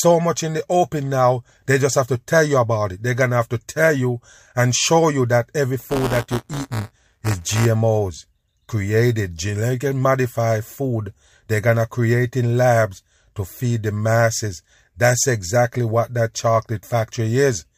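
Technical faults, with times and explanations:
5.79 to 7.66 s, buffer tearing: right after "show you that every", the speech picks up a robotic rattle at 172 Hz, which fits a 256-sample buffer. The writing program and the hardware reading the ring buffer have drifted so they cross inside each period. A small slice of every buffer, a few percent, replays audio from one lap back, roughly 10 ms old, with hard joins at both edges. Those repeating seams are the buzz, and it rides only on the signal.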